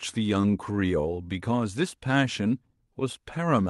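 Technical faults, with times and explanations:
0.41–0.83 s, repeated stalls (stutter): over this stretch the jitter buffer ran dry four times as packets arrived later than they were due, and each time the receiver held the last sound going rather than leave silence, about 59 ms filled in all, with no gap longer than 20 ms. Nothing is lost, but the speech lurches and drags, and the player later dropped around 10 ms to catch up, so the rhythm briefly hurries.
2.93 s, short stall from a late packet: a single packet turned up about 18 ms behind schedule, leaving the jitter buffer empty for a moment. The receiver stretched the preceding sound across that 18 ms and then resumed exactly where it had stopped, so no speech is missing. What can be heard is one sound held slightly too long, with a faint buzzy or dipped quality where the stretching sits.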